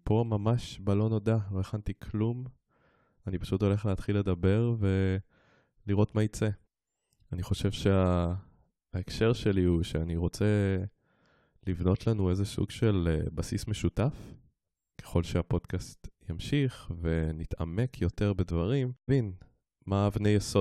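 Speech, with a single discontinuity at 19.08 s, where the audio jumps abruptly forward with a small blip at the join. The likely cause is a stream segment skipped: one chunk of the segmented stream failed to load and the player resumed with the next chunk. Unlike a buffer dropout, there is no gap of silence and no repeat. The sound simply lands later in the programme, so the material that should have come next is missing.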